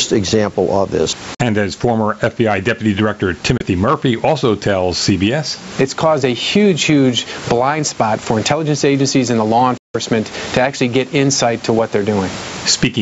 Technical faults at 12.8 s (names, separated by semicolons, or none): gain pumping